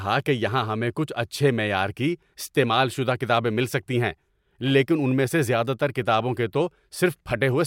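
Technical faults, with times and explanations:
No technical faults are audible anywhere in this speech recording.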